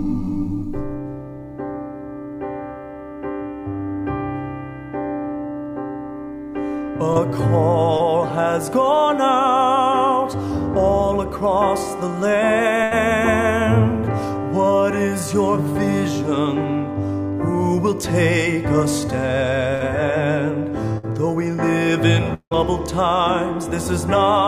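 Short concealed packet loss at 7.13 s and 7.97 s: about 20 ms of audio never arrived, and the receiver extended the preceding sound, leaving brief smears.

Bursts of packet loss at 12.83 to 12.93 s, 19.75 to 19.82 s and 20.98 to 21.05 s: 60 to 80 ms went missing. Each gap is bridged by a fading continuation before the sound resumes further on.

Long network dropout, likely the cause of what is heard at 22.34 to 22.53 s: the last sound is stretched and fades, then drops to near-silence, with roughly 180 ms lost.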